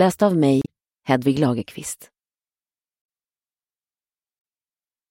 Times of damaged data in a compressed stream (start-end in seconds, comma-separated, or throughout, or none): 0.62-0.67